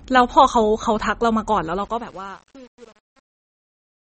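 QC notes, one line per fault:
Throughout: MP3 compression. The speech sounds watery and swirly, with smeared consonant attacks and a metallic edge on s sounds, and nothing is heard above 8.3 kHz. This is likely low-bitrate MP3 encoding, around 32 kbps, which cuts the treble and lets weak frequency detail flicker on and off between frames.
1.65–4.13 s: truncation distortion on a fade. As the fade-out grows quieter, the sound turns gritty, worst from 1.77 s to the end. The fade was computed at only 8 bits with no dither, so the low-level waveform collapses into coarse square steps.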